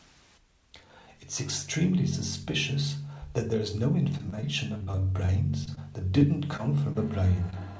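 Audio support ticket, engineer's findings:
Repeated packet loss (robotic sound), 4.18–5.79 s. Choppy speech with pieces missing. Twelve gaps up to 31 ms, each patched by extending prior audio. About 14% of the stretch is concealed.

Short concealed packet loss at 6.19, 6.57, 6.93 and 7.50 s. Brief smears, each about 20 ms. Missing packets were filled by continuing the last sound, then blended back.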